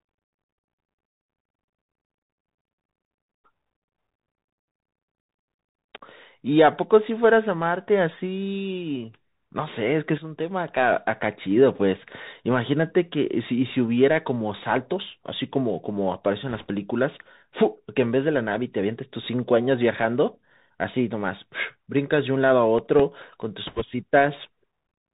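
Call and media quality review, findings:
Narrowband, granular hiss and scratchy s sounds throughout, nothing above 4 kHz. Bluetooth CVSD headset codec, consistent with a 64 kbps link: the one-bit adaptive step lags loud high sounds. Constant, unlike the bursts below.

Rushing, crackly noise at 16.49–16.71 s and again, stronger, at 23.67–23.83 s. Bit errors on a Bluetooth voice link, a few percent of bits flipped. Each error is small and decays, so there are no sharp clicks.

Seven short ticks, longest about 2 ms, at 22.15–23.42 s. CD scratch ticks: damaged data beyond error correction gets interpolated once per disc turn. Discrete and regular, not the diffuse crackle of bit errors.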